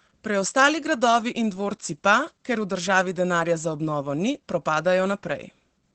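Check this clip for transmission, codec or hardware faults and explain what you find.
The speech carries one fault, present for the whole clip: Opus voice compression. From start to finish it sounds muffled and hoarse, with a slightly robotic buzz and nothing above about 8.6 kHz. That wideband ceiling and the coarse texture fit Opus running its SILK linear-prediction coder at a low bitrate, around 12 kbps. The encoder models the vocal tract and codes the excitation sparsely in short frames, roughly 20 ms each. It drops the upper band entirely, which removes the airy detail and leaves plainly audible damage.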